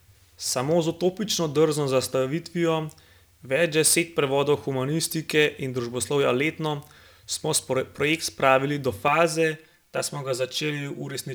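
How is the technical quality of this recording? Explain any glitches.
The recording has one clear fault, a channel delay causing comb filtering, from 9.08 s to the end. One channel arrives roughly 5 ms behind the other, and when the two are summed to mono, whatever they share cancels at regularly spaced frequencies, starting near 100 Hz and repeating up the spectrum. The speech there turns hollow and phasey, because fixed notches are carved through its range.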